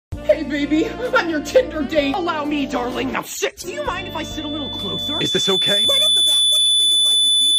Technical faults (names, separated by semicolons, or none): loudspeaker feedback squeal